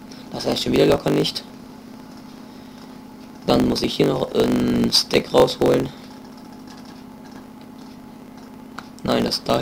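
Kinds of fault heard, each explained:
Block size mismatch (truncated): block tails are discarded between stages, producing a 50 Hz buzz throughout and audio running 1.07 times fast at near-normal pitch.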